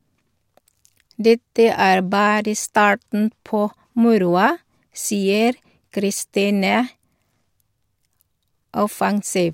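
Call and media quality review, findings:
No issues found in the call and media quality review for this speech clip.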